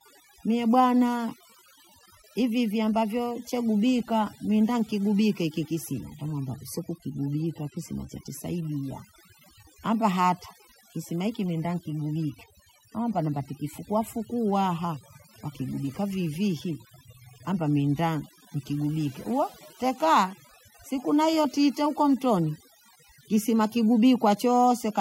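Overdone noise removal runs throughout the clip. A noise reducer set far too aggressively has pushed individual frequency bands down or out whenever they sat close to its noise estimate, taking quiet parts of the speech with them. The background drops and breaks up into twinkling specks.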